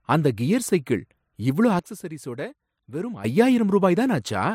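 Speech, with a sudden gain jump: at 1.79 s the level and background noise drop together by about 12 dB, snapping back at 3.24 s, likely an unramped digital gain change.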